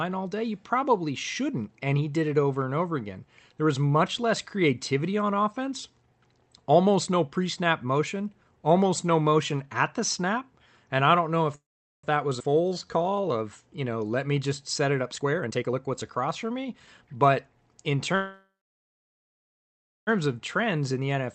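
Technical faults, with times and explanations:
11.55–12.05 s, call audio freeze: the speech stops for about half a second, mostly silent. Likely delayed packets draining the jitter buffer; nothing lost, just a gap.
12.39 s, skip ahead: playback jumps forward abruptly, dropping roughly 150 ms of speech, with the two sides spliced almost directly together.
12.54–13.33 s, jitter buffer slow-down: repeated pitch periods stretch this stretch to 85% speed, adding 128 ms to rebuild the buffer's reserve, same pitch, drawn out.
15.14–17.31 s, jitter buffer speed-up: short pitch-period chunks get trimmed, running the speech at 122% and shaving roughly half a second, so it sounds hurried.
18.15–20.09 s, call audio freeze: a longer halt of about 1.9 s, nearly all silence. Likely a packet stall; speech resumes where it left off.
20.59–21.30 s, jitter buffer speed-up: a milder trim at 107% speed, removing around 70 ms, which leaves the speech just slightly rushed.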